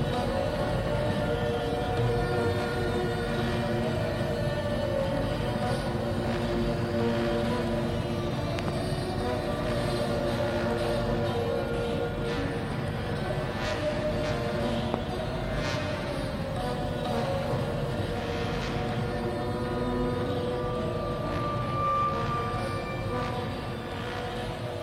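At 8.59 to 8.70 s a loud pop sounds as a quick double thump, and at 14.94 to 14.96 s a single one, each roughly 20 dB above the audio. This is likely a voltage spike, from a plug, switch or static. Unlike a dropout click, the sound carries on unbroken underneath.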